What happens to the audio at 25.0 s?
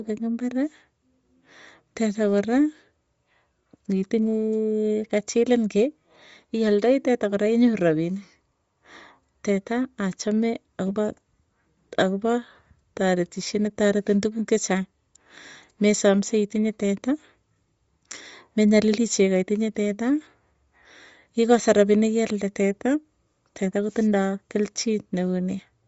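At 25.0 s the speech carries the same damage heard across the whole clip, likely from Bluetooth LC3 compression. Nothing is present above 7.7 kHz. The codec works in 10 ms frames and, at what sounds like about 32 kbps, fills the thinned upper band with noise. The result is a plainly audible breathy, grainy edge.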